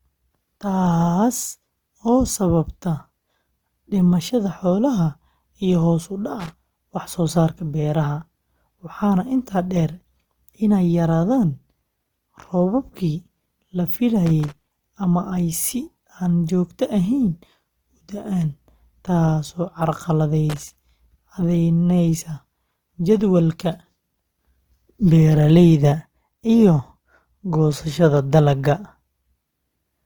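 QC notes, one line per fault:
Throughout: Opus compression. The speech has a grainy, rough texture, with noisy, smeared detail where finer structure should be. It sounds like the likely cause is Opus in its music mode near 24 kbps, filling starved bands with folded or noise-like content. The bandwidth stays full, reaching about 20 kHz.
6.40 to 6.53 s, 14.26 to 14.89 s, 20.50 to 20.84 s: loose connector crackle. Each burst is an irregular scratching crackle, with the longest at 14.26 s. A worn or dirty contact opens and closes rapidly, chopping the signal.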